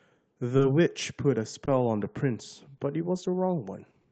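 Speech heard over a call link, with Opus coding noise and a top end that stops near 8 kHz. Clock drift between sender and receiver runs through the whole clip. The sender's clock is roughly two percent slow, so the jitter buffer keeps draining. The receiver repeats tiny pieces to cover the gap, and small uneven hiccups recur throughout. There are also short stalls from late packets, at 1.65 s, 2.77 s and 4.01 s. Each time the buffer ran empty and the last sound was stretched, by 20 ms, 20 ms and 30 ms. Nothing is lost. Each one is a brief held sound with a slight buzz or dip.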